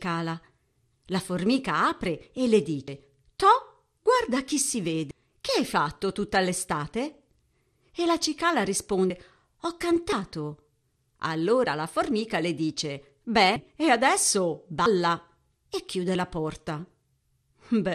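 From start to finish the speech sounds dull, with a gurgling, granular texture and upper frequencies that flicker in and out. This is plainly audible codec damage, likely MP2 compression at a bitrate around 80 kbps. The codec divides the signal into sub-bands and shares out a limited bit budget among them. Starved upper bands are switched off entirely, and the bands that remain are coarsely quantised.

Five abrupt skips interrupt the speech, each heard as an instant jump forward with no gap of silence. They are consistent with a dropped buffer (overrun), where samples were overwritten before being read and the surrounding audio was spliced together. The skips fall at 2.88 s just after "formica apre e le", at 5.11 s after "guarda chi si", at 9.10 s, at 10.12 s, and at 14.86 s after "e adesso". Most remove about a tenth of a second of sound. The one at 5.11 s removes roughly a third of a second.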